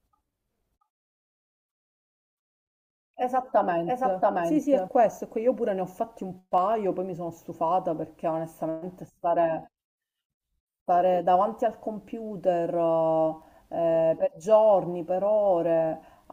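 From the very start until 4.88 s, the speech carries a doubled audio track: a second, full-band copy trails the first by roughly 0.7 s at about the same level, so every syllable returns as a clean echo with no decay or room colour. The likely cause is the audio being captured twice through a slower path. On a spectrogram each pattern repeats, shifted right by the same gap, and at 4.88 s the copy stops abruptly.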